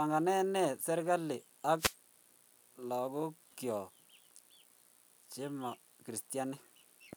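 At 1.77 s, right after "ne serikalit ag", there's a wireless microphone noise hit: a brief swish of static lasting about 0.18 s as the FM signal fades.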